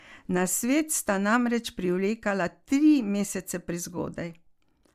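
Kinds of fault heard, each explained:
No kinds of fault are heard in this speech.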